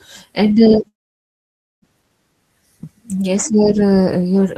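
From 0.87 to 1.85 s the speech stops in a call audio freeze, likely a jitter-buffer underrun; about 0.9 s of silence is inserted, then speech resumes with nothing lost.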